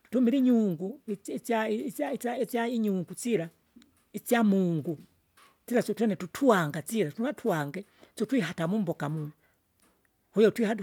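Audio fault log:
No faults detected in speech.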